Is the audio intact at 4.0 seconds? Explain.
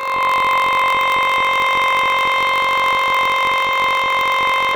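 No. At 4.0 seconds the music is affected by planar audio read as interleaved, a fault present across the whole clip. Each block of about 21.77 ms stores all left samples followed by all right samples, but the player reads them as alternating pairs. Each block therefore plays twice at double speed, once from each channel. Although each block is raised 12 semitones, the blocks are short, so the music has no clear octave shift and instead sounds like a robotic buzz at the 45.9 Hz block rate.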